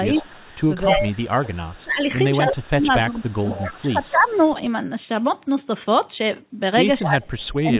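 The echo canceller likely could not tell the near talker from loudspeaker echo while both sides spoke, so it turned the speech down. This speech suppressed in double talk dips the speech by about 20 dB from 0.15 to 0.41 s, and by about 25 dB across much of 0.82 to 4.46 s and again from 7.02 s to the end. During these stretches the speech thins and drops out in pieces.

Echo leak also runs through the clip, likely because the canceller let part of the loudspeaker signal back through the microphone. It sounds as a copy of the speech trailing 261 ms behind. The copy sits about 20 dB down from 0.16 to 1.35 s and is barely there at 1.73 to 1.83 s. It rises to about 15 dB down from 2.99 to 3.71 s, falls to about 25 dB down from 4.05 to 4.46 s, and is loudest, about 10 dB down, in a brief burst at 7.02 to 7.09 s. Throughout, the G.711 mu-law call path leaves nothing above 4 kHz.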